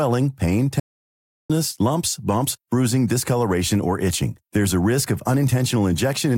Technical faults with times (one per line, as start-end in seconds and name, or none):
0.80-1.50 audio dropout to silence